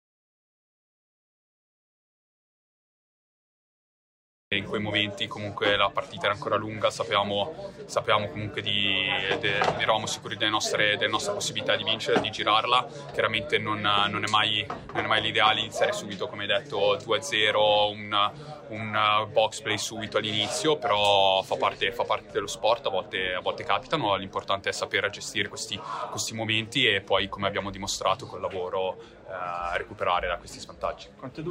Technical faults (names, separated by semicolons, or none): audio dropout to silence